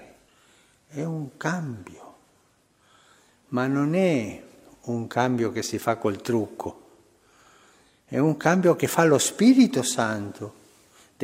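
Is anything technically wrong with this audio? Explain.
No, nothing technical stood out on listening to this audio.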